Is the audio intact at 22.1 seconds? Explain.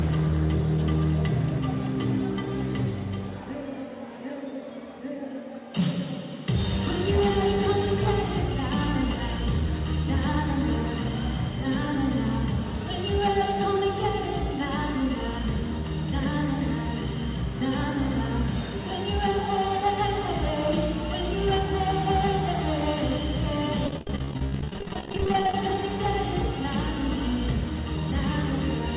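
Yes, the audio is intact at 22.1 seconds, with nothing there beyond the narrow telephone-band sound of the call path, which carries nothing above 4 kHz.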